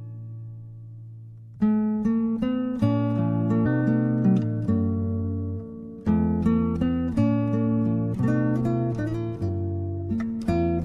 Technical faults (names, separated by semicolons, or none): compressed frames skipped